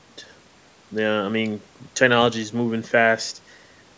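No technical faults can be heard in this speech recording.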